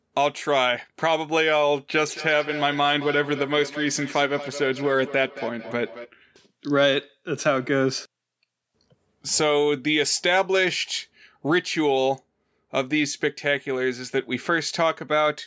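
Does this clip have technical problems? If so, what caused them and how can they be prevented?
Yes. From 1.97 to 6.15 s there is feedback echo between two devices: speech returns roughly every 200 ms, peaking about 13 dB below the speech. Two devices in the room share the call, and each device's echo canceller ignores the other's loudspeaker. To prevent it, join the call from only one device per room, or mute the others' microphones and speakers.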